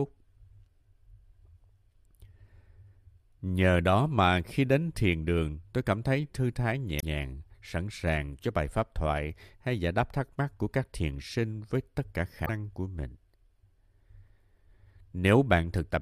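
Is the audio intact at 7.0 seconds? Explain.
No. Right after "cảm thấy thư thái", from about 6.96 to 7.03 s, there's damaged data in the compressed stream. The decoder hits bad frames, loses sync and hunts for the next header, so you get a short glitch before "sẵn sàng cho bài".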